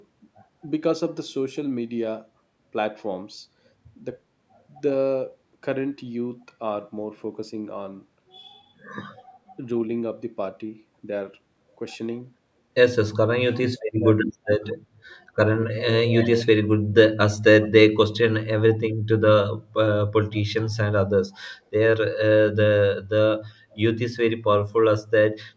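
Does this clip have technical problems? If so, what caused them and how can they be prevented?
Yes. Speech suppressed in double talk: the sound briefly dips or drops out by about 20 to 35 dB at 13.53, 13.98, 14.3 and 18.66 s. The likely cause is an echo canceller turning down this side's voice along with the loudspeaker echo while the two sides overlap. Prevention: use a headset or tune the echo canceller's double-talk detection.

Echo leak: a delayed copy of the sound arrives 229 ms later, strong from 16.07 to 16.46 s and faint around 23.7 s. It is likely residual loudspeaker echo that the far end failed to cancel. Prevention: lower the far-end speaker volume or use headphones there.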